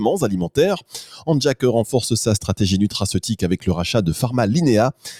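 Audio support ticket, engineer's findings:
Noise suppressor applied to music or sounds, throughout. Level pumps and flutters, held tones and tails thinning, swings of around 5 dB. Speech-tuned noise suppressor left in path, reading sustained content and ambience as noise.

Distinguishing point: onsets pass almost intact while sustains sink. A compressor would duck on loud attacks instead, and a gain rider would move the whole level slowly, not frame by frame.

Sound cut by the noise suppressor, 1.11 to 1.28 s. Local dip of about 11 dB, roughly 150 ms affected. Same suppressor classing this stretch as noise and attenuating it harder than its surroundings.

Distinguishing point: level sinks, but sound stays present throughout. A dropout or packet loss would give a hard gap or silence with abrupt edges.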